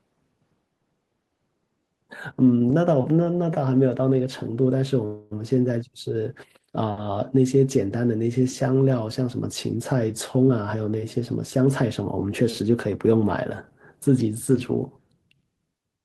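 Speech, with two faults. From 5.05 to 5.33 s there is a call audio freeze. The last sound hangs as a fading buzz or hiss for about 0.26 s, likely from delayed packets emptying the jitter buffer. From 10.47 to 13.24 s a jitter buffer speed-up runs the speech at 109% speed, same pitch, trimming about 0.3 s so it sounds hurried.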